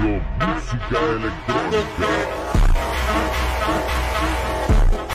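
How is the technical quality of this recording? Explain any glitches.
The recording has one interference fault, near the end. From 3.10 to 4.97 s there is GSM phone buzz: a nearby 2G phone transferring data transmits in bursts about 217 times a second, and the audio circuitry rectifies those radio pulses. This produces a hard, raspy 217 Hz buzz, rich in harmonics, about 8 dB below the sound, cutting in and out regardless of it.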